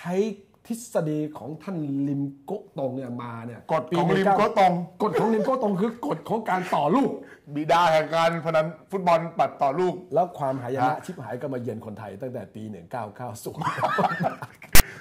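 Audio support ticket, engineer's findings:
File tags played as audio, 14.75–14.81 s: hard-edged rasp, then dead silence. Text tag bytes decoded as samples, offset DC-shifted block; zero padding flat-lines. Waveform shows abrupt rectangular burst, broadband smear on spectrogram.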